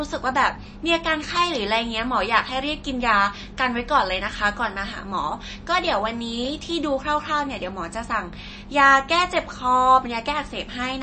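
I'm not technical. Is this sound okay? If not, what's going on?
No. MP3 compression affects the whole recording. The speech sounds dull and muffled, with nothing above about 8.3 kHz, and the damage is easy to hear as a watery, swirly quality, especially on s sounds. The likely cause is saving the file as a heavily squeezed MP3. To keep it small, the encoder cut off the treble and threw away quieter details. Those details flicker in and out from moment to moment, which is what makes the voice sound underwater.

Clock drift buffer slips cause a regular click about every 1.02 seconds, from 0.35 s to around 10.52 s, roughly ten in total. This likely happens because two pieces of equipment passing the sound between them keep slightly different time. The gap between them slowly builds up or runs dry, and each time it has to catch up, a tiny sliver of sound is skipped or repeated. That makes a click at a steady beat.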